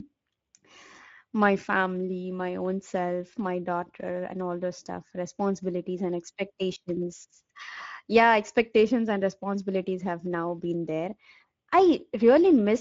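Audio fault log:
throughout: Speex codec. Plainly audible coding damage roughens the speech, consistent with a bitrate near 17 kbps that leaves the CELP excitation short of detail. A spectrogram shows blurred harmonics and a hard ceiling, with nothing above 7.6 kHz.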